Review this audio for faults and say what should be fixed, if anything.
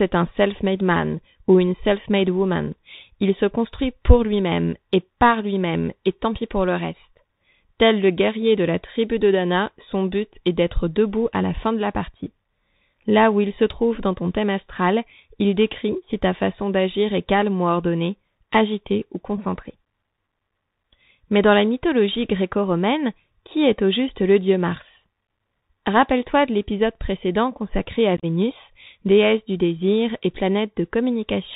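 The whole clip carries the Bluetooth CVSD headset codec. Nothing reaches above 4 kHz, s sounds turn scratchy, loud high passages distort as the one-bit delta steps fall behind, and a granular hiss sits underneath, which fits a 64 kbps CVSD link. Plain telephone band-limiting would be clean, without the grain. Using a wideband headset profile (mSBC or LC3) prevents it.

Between 28.17 and 28.25 s there is unconcealed Bluetooth headset packet loss: about 56 ms of speech goes missing, scattered across roughly 68 ms, with the longest hole about 30 ms. This fits around fifteen short packets replaced by silence or an idle pattern. The holes have abrupt edges, and the speech returns quieter for a moment. Codec dropouts smeared by concealment would sound softer. A stronger radio link and packet loss concealment prevent it.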